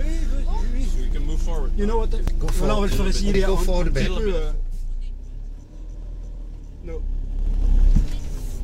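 At 1.12, 2.28 and 3.34 s the sound jumps forward. Each jump is most likely a dropped buffer (overrun). The samples were overwritten before being read. Around 50, 50 and 150 ms vanish, and the edges butt together.

From 4.09 to 4.73 s the level falls by about 10 dB in 2 dB steps, roughly seven per second. Each unsmoothed step clicks. This zipper noise is heard as a ticking that rides on the sound.

At 5.34 s another skip removes roughly 100 ms.

From 7.28 to 7.68 s zipper noise returns as the level rises about 10 dB. The steps come faster, near fifteen per second, so the ticking is denser.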